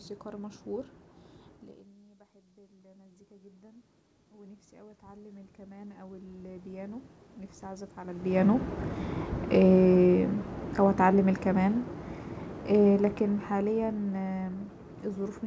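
From 2.01 to 7.95 s, the voice and the room noise behind it swell together slowly, until the level recovers just before "على البيانو". This is automatic gain rising. After the talker moved away at about 1.5 s and the input dropped by about 20 dB, the gain control raised its gain by about 21 dB over those six seconds.

From 9.59 to 11.86 s, and again from 12.71 to 14.42 s, the voice sinks along with its background, by about 4 dB the first time and about 8 dB the second. This is automatic gain falling. After the talker moved again at about 8 s, the gain control judged the input too loud, or its background noise too strong, and backed its gain off in two gradual steps.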